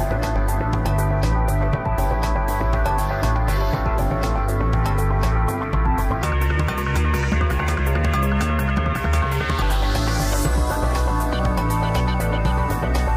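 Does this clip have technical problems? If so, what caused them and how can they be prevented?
Yes. From 6.23 to 9.62 s the sound has a wrong sample rate fault. It runs 1.38 times fast and 5.55 semitones high, which fits 32 kHz material played at 44.1 kHz. Unlike a pitch shift or time-stretch, speed and pitch rise together by the same ratio. Resampling to the device rate, or tagging files with their true rate, prevents it.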